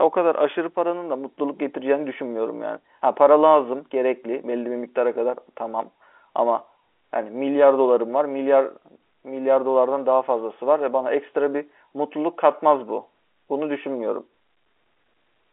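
Speech carried over G.711 A-law telephone coding at 64 kbps, with the familiar narrow line band of roughly 300 Hz to 3.5 kHz and no content above about 3.8 kHz, and no technical fault can be heard anywhere in it.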